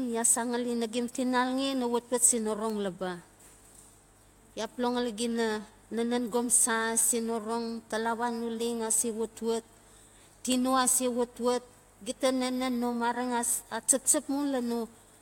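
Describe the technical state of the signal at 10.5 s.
At 10.52 s there's a bit error spike in the speech: a single flipped bit corrupts two consecutive samples, so the waveform jumps by a power of two and snaps straight back. You hear it as one sharp tick peaking around -13 dBFS. Because it's only a couple of samples wide, its energy is spread across the whole spectrum and has nothing to do with what's being said.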